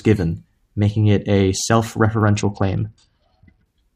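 From about 2.1 s to 3.7 s the speech goes dull and gritty, a Bluetooth SBC bit pool drop, which fits the bit pool falling from 31 to 8, around 66 kbps.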